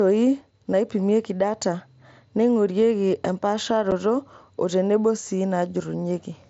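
At 3.91 s, unconcealed Bluetooth headset packet loss leaves a 7.5 ms hole in the speech with abrupt edges, which fits a single dropped packet replaced by silence.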